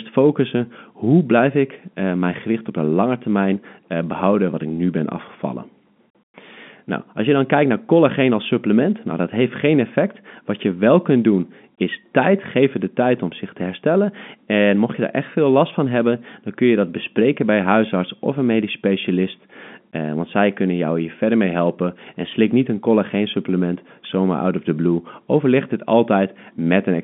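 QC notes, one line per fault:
No technical faults detected.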